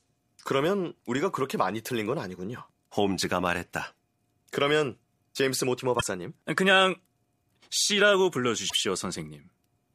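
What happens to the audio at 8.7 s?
Damaged data in the compressed stream from 8.66 to 8.74 s makes the decoder lose frame sync, producing a brief chirp, squawk, click or short hole in the speech.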